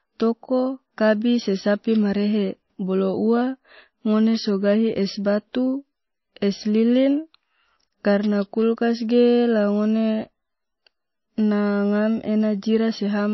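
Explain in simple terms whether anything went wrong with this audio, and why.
The speech sounds dull and watery from start to finish, with nothing above about 5.8 kHz, which is most likely heavy MP3 compression squeezing it too hard.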